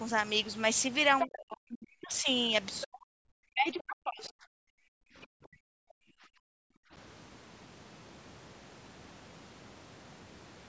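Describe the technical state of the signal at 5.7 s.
At 5.7 s the speech sits inside a short dip running from about 5.61 to 5.9 s, with roughly a fifth of a second in all knocked down by around 40 dB at worst. That's most likely speech suppressed in double talk: the echo canceller mistook the talker for loudspeaker echo while both sides spoke, and squashed it.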